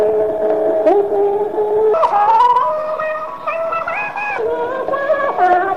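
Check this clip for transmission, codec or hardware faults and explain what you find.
One fault, a section at the wrong speed. From 1.94 s to 4.39 s, part of the sound is played back about 1.54 times faster than it was captured, likely because that stretch was clocked or resampled at the wrong rate during editing or playback. Speed and pitch are tied together here, so the section jumps up by roughly seven semitones and runs noticeably hurried. At 4.39 s everything drops back to its natural pitch and pace.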